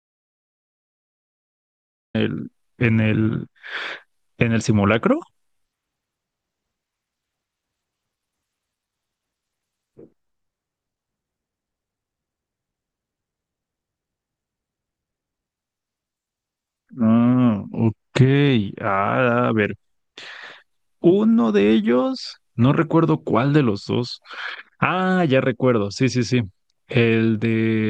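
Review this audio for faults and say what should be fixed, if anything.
The clip opens with an audio dropout to silence. From the very start until 2.15 s there is nothing at all, not even room tone, and the speech then cuts in already mid-flow rather than beginning naturally. The input was likely lost through a loose connection or a stray mute while recording carried on. A genuine pause would still carry background hiss, but this gap is plain silence. Check that the input is live and unmuted before recording starts.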